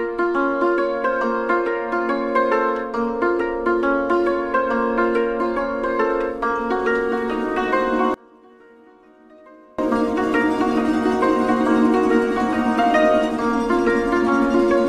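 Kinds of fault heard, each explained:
One channel inverted: from 8.14 to 9.79 s the sound drops by about 30 dB to a faint residue. The likely cause is one stereo channel with flipped polarity, so everything common to both sides cancels when they are summed to mono and only their small difference survives. On a waveform the envelope shrinks to a near-flat sliver for that stretch. A spectrogram shows the whole band fading to a dim trace.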